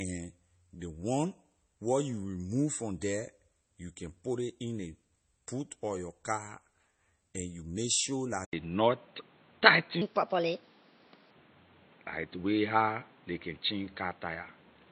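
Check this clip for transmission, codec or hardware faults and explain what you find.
Three faults are audible in this speech clip. Two run together near the end.

Throughout, the speech carries a watery, swirling texture and a dulled top end, consistent with likely MP3 compression at a low bitrate around 32 kbps. The fixed treble ceiling and shimmering artefacts distinguish it from simple filtering.

At 8.45 s, after a 80 ms silence, the sound turns boxy and stays that way. The band narrows, the level shifts by roughly 5 dB, and new background noise sits about 30 dB below the speech, likely from an input switched to a poorer device. The gap and the new noise set it apart from a codec change.

From 10.02 to 11.31 s, a section plays at the wrong speed, 1.32 times too fast, so the speech rises about five semitones and hurries. It likely came from a clock mismatch, and the pitch and tempo moving together distinguish it from a tone change.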